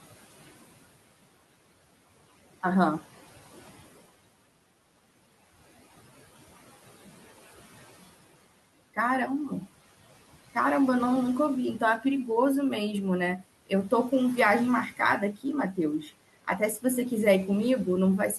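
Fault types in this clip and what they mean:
Noise suppressor artifacts: it ducks the room noise about 15 dB whenever speech pauses, then lets it swell back under the talking throughout.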